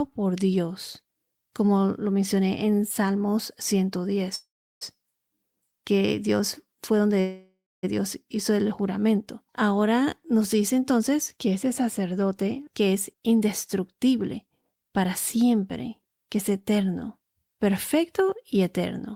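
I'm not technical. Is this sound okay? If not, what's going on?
No. At about 4.35 to 4.97 s and again at 7.2 to 7.85 s the speech stops and a fading buzz trails into silence, then picks up exactly where it left off. This is a call audio freeze, likely from delayed network packets; nothing is lost.

From 12.8 to 15.51 s the speech sounds hurried, about 8% faster, though the pitch stays the same. This is a jitter buffer speed-up: the receiver trims tiny slices, about a fifth of a second in total, to cut down built-up delay.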